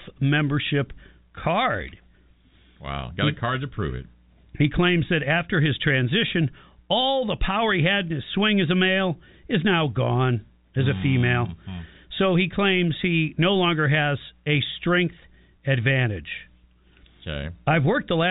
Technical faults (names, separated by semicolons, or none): none